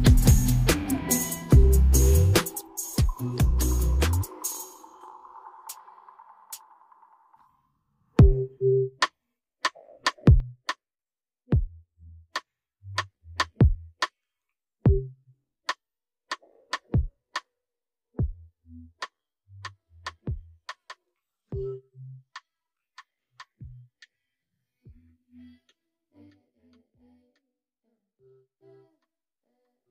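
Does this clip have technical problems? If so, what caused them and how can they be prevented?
Yes. The sound drops abruptly by about 6 dB three times, from 2.61 to 5.01 s, 10.40 to 12.80 s and 26.30 to 28.57 s, then snaps back each time. That's the signature of one channel dropping out: once the stereo is summed to mono, whatever both sides shared loses half its contribution. The likely cause is a flaky cable or connector on one side. Reseating or replacing the leads and monitoring both channels while recording should prevent it.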